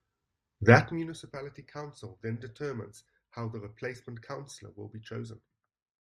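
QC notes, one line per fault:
0.73–1.11 s, zipper noise: the level drops by about 20 dB in unsmoothed 1 dB steps, around fifty a second, so each jump clicks and a fast ticking rides on the speech, ending just before "council then determines how".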